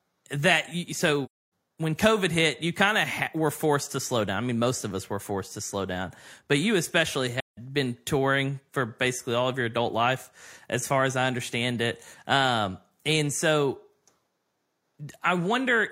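It's a speech clip with AAC frame loss with muting in two spots: 1.25 to 1.39 s right after "that you", and 7.40 to 7.58 s between "down but you especially" and "been touring for basically". The decoder zeroed the missing frames, so the overlapping windows fade the sound into a soft-edged hole.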